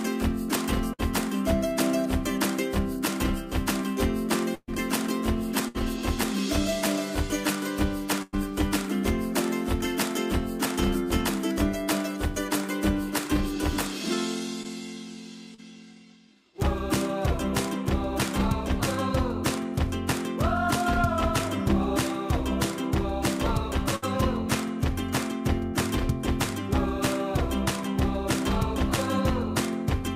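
Bursts of packet loss at 0.93, 4.55, 5.68 and 8.22 s drop 60 to 140 ms of sound. The last sound is stretched and faded, then the audio jumps ahead; at 4.55 s it fades to silence first. Short concealed packet loss at 14.63 and 15.54 s fills 20 to 40 ms gaps so briefly that it is only a smear or wobble, not a fading hold. A final burst at 23.96 s loses 60 ms.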